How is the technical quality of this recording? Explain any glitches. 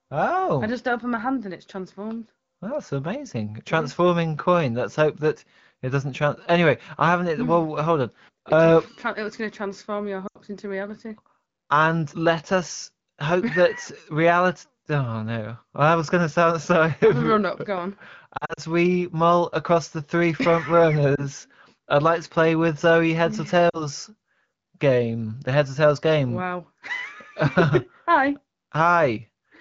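Four brief dropouts break the speech; the light coding colour of AMR wideband (HD Voice) is also audible. At 10.27 to 10.38 s, 18.37 to 18.60 s before "we mull across the", 21.16 to 21.23 s after "across the three front", and 23.69 to 23.82 s after "heads or", the sound warbles, dips or drops to near silence. These are lost AMR speech frames: radio errors corrupted packets, so the decoder extrapolated from the last good frame at fading gain. The second event scatters short gaps over 200 ms; the third fits one 20 ms frame.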